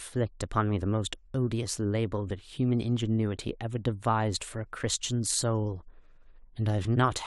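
No faults detected anywhere in the speech recording; nothing to flag.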